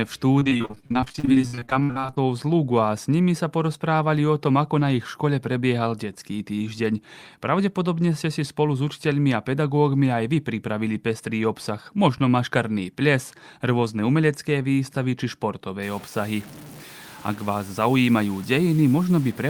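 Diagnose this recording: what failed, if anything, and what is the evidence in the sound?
The network path failed first, with repeated packet loss (robotic sound) from 0.39 to 2.18 s. The speech turns choppy and robotic there. More than thirty short holes follow one another, the longest 59 ms. Each hole is bridged by stretching the last good sound forward. That patching covers about 42 percent of the stretch. Missing audio is replaced by repeated fragments, which gives the machine-like texture.

From 15.83 s to the end, the speech carries a grainy, gritty distortion. A noise floor sits roughly 25 dB under the signal. This points to low bit depth without dither at the sample-format conversion stage. The cause is likely truncation to around 6 bits with no dither added. The rounding error then tracks the signal itself. Quiet passages break into grit rather than clean, steady hiss.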